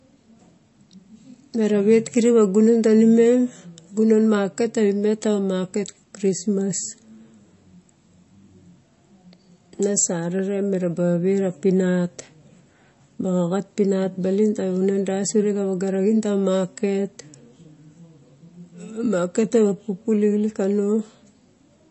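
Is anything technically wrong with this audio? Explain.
Yes. Throughout, likely MP3 compression at a low bitrate, near 33 kbps, cuts everything above 8 kHz and drops weak frequency lines, leaving the speech dull, watery and swirly.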